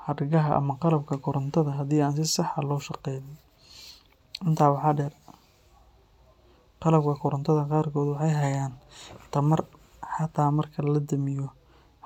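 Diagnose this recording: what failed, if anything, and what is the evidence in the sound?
Nothing failed; no fault is audible anywhere in the recording.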